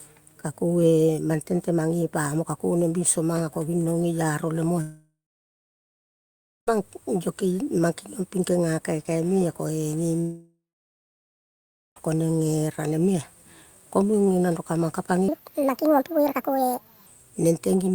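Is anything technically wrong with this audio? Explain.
Yes, there are three faults.

From 4.81 to 6.69 s and again from 10.21 to 11.98 s, a long network dropout likely cut off the stream, so about 1.9 s and 1.8 s of speech never arrived. The receiver briefly stretches the last sound into a fading buzz, then gives way to silence for roughly 1.5 s and 1.4 s. When the speech resumes, the missing stretch is simply gone.

From 15.28 to 17.07 s, a section at the wrong speed plays back 1.61 times faster, likely because that part was run against the wrong clock. Because pitch rises with speed, the speech jumps about seven semitones higher and sounds hurried and chipmunk-like, then drops back to normal afterwards.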